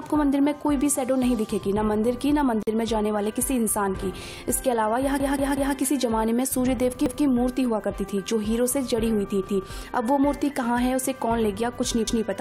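At 2.63 s there's a gap at a join of encoded pieces: the sound drops out for about 45 ms, roughly 2.63 to 2.67 s, with smeared edges, then picks up exactly where it left off. That happens when separately encoded chunks, here apparently about 10 s long, get stitched together without trimming the encoder's start-up delay and end padding, so that bit of silence stays in.

Then come repeated buffers, where playback ran dry and the device replayed its last block instead of waiting. Each repeat is about 186 ms, which fits an 8192-sample buffer. The worst is 5.20 to 5.76 s, where one piece plays three extra times, a stutter with hard joins. Single extra plays follow at 7.06 to 7.25 s, 9.47 to 9.66 s and 12.07 to 12.26 s. Nothing seems skipped afterwards; the sound just resumes late.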